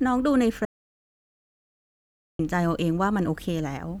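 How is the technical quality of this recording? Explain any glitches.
The recording has one clear glitch: an audio dropout to silence from 0.65 to 2.39 s. The speech stops abruptly and returns mid-flow, with 1.74 s lost. The gap is silent with no room tone, unlike a noise gate, which closes more gently. The likely cause is a lost input while recording continued.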